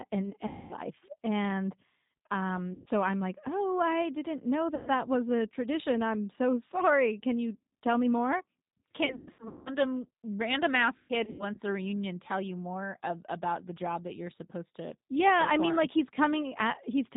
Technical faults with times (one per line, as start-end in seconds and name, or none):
0.00-17.17 G.729 codec
0.47-0.75 VoIP packet loss concealed by the speech codec
2.74-2.89 VoIP packet loss concealed by the speech codec
4.75-4.90 VoIP packet loss concealed by the speech codec
9.06-9.72 VoIP packet loss concealed by the speech codec
10.97-11.60 VoIP packet loss concealed by the speech codec